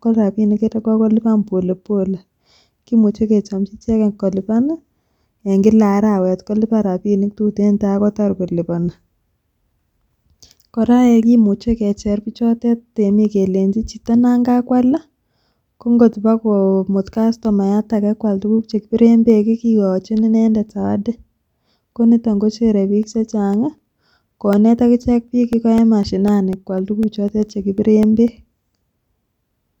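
From 23.03 s to 29.53 s, just after "koniton kochere biik", the speech shows periodic USB or driver dropouts: something repeatedly stalls the USB bus or audio driver every 0.25 s, and each stall loses roughly a millisecond of audio, replaced by silence. The result is around thirty evenly spaced ticks, about four per second, that are audible where speech is present and vanish in the pauses.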